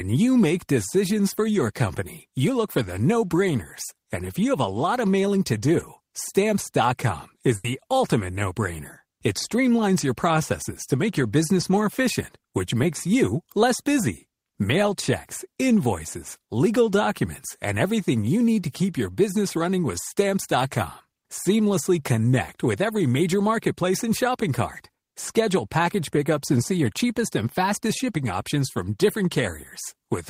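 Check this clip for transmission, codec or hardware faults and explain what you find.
Two transmission faults show up in this speech, both from packets that didn't arrive in time.

At 7.56 to 7.65 s, just before "ultimate no brainer", there's a burst of packet loss. About 80 ms went missing, and the receiver stretched out the last sound while fading it, so you get a brief held, dying tail before the audio jumps ahead.

Around 11.61 s, between "processes to make your" and "more efficient which makes", there's a short concealed packet loss. Roughly 10 ms never reached the decoder, so the receiver continued the previous sound and blended back into the real audio, leaving a tiny smear.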